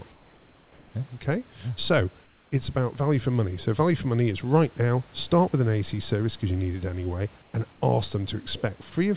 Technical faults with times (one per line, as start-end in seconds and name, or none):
0.12-0.94 comfort noise in place of the background
2.24-2.52 comfort noise in place of the background
7.42-7.82 comfort noise in place of the background